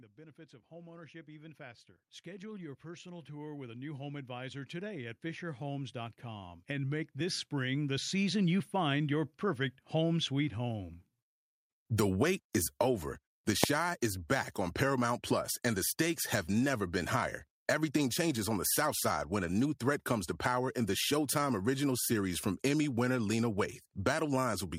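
From 0.15 s to 8.55 s, automatic gain rising lifts speech and background together by about 20 dB, reaching full level just before "find your perfect home". At 13.64 s, just before "is back on", invalid numbers at full scale give a single sharp bang: a 0.73 ms block, which fits a 32-sample block, was pinned to one extreme value.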